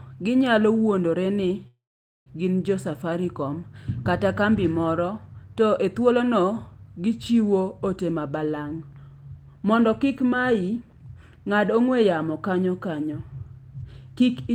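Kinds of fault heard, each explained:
call audio freeze: at 1.67 s a brief fading tail, then 0.47 s of flat silence on the waveform, likely from late packets, before "gin jo" resumes intact.
jitter buffer speed-up: 9.73 to 10.77 s runs 9% fast as tiny pitch-period pieces are cut, so spectrogram harmonics keep their spacing while syllables shorten.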